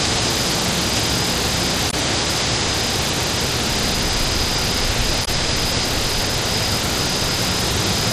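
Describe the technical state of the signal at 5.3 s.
Damaged data in a compressed stream affects 5.21 to 5.28 s: corrupted bytes make the decoder misread frames and lose sync, producing a brief chirp or blip.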